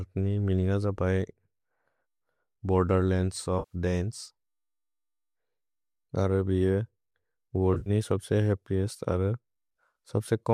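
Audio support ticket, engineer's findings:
AAC frame loss with concealment, two dropouts. 3.59–3.75 s: 120 ms smeared, phasey patch, consistent with about a dozen lost 10 ms frames rebuilt from the last good spectrum; spectrogram shows a blurred block. 7.74–7.90 s: 90 ms lost, scattered over 120 ms, longest run around 40 ms; noisy flickers, waveform showing short smoothed envelopes between intact stretches. Both sit on a light low-delay AAC layer, likely AAC-ELD at 64 kbps.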